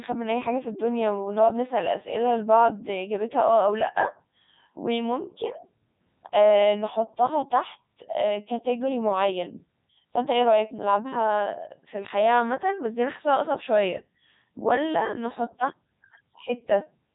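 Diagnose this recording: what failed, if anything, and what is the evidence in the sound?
Robotic, buzzy speech throughout, with nothing above 3.8 kHz: a Codec 2 vocoder at the codec stage, rebuilding the voice from sine waves, consistent with its 3.2 kbit/s mode.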